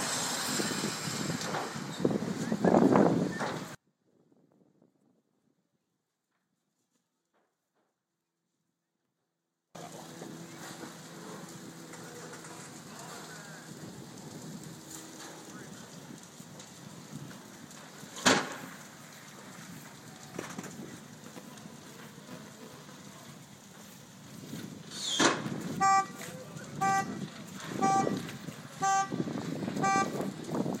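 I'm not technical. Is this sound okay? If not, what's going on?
No. From 3.75 to 9.75 seconds the sound nearly vanishes to a faint trace, likely one channel inverted, so the two stereo sides cancel out.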